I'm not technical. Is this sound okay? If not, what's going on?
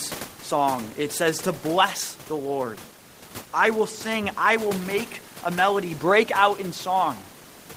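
Yes, nothing has gone wrong with this recording. There is a faint background of room noise from where the microphone was, sitting well below the speech, and that is simply part of the space rather than a problem.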